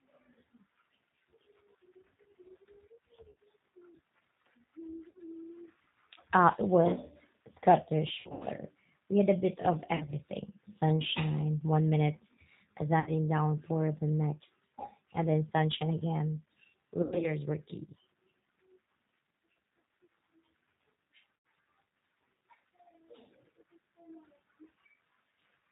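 A speech recording carried over the G.729 codec at 8 kbit/s: rebuilding speech from a filter, pitch predictor and sparse pulses cuts everything above 4 kHz and leaves the voice plainly rough and synthetic. VoIP packet loss concealed by the speech codec occurs at 3.3–3.4, 5.1–5.2, 8.2–8.4, 10.0–10.1, 13.0–13.1, 17.0–17.4 and 21.3–21.4 s, with 60 to 160 ms missing each time. The decoder stretches its last frame into a fading buzz or noise, and the voice stays weak briefly afterwards.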